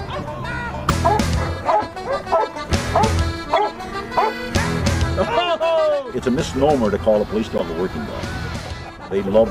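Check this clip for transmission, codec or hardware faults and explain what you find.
Three short corrupt-frame-decoded events appear, at 0.89 s, 3.56–3.58 s and 7.58–7.61 s. In each, a compressed frame arrived with flipped bits and the decoder played it anyway. Misread gains and codes put energy at the wrong frequencies, producing a brief chirp or noise burst. The first two sound like a few damaged frames in a row, the third like a single frame. The first burst is the loudest, the second stays well below, and the third comes within about 5 dB of the first.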